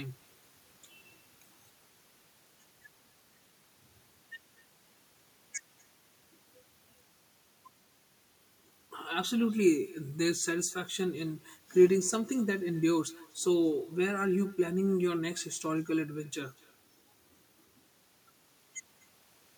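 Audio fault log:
Throughout, echo with no canceller: every phrase of this speech is followed, about a fifth of a second later, by a faint copy, sitting about 25 dB below the direct sound. The far end is playing the call through a loudspeaker, its microphone picks it up, and nothing subtracts it before it returns over the network. Unlike room reverberation, which smears continuously from the source, this is a discrete, delayed, thinner repeat separated by a gap.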